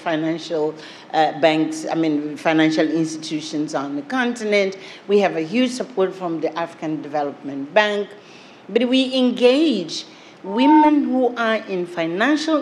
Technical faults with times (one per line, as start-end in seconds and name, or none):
10.45-10.91 loudspeaker feedback squeal